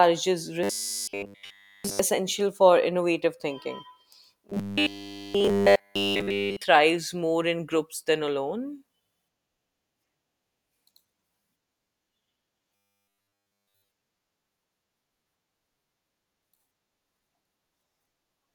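Speech, with three stretches of robotic sound from repeated short buffers: 0.63 to 1.99 s, 4.50 to 6.64 s, and 12.75 to 13.88 s. In each, the voice becomes a rigid, metallic buzz fixed at 100 Hz. It follows the words only loosely. Nearly all of the audio in these stretches is a repeat. The likely cause is late-arriving audio, with a 10 ms slice looped to fill the gap while the real sound is skipped.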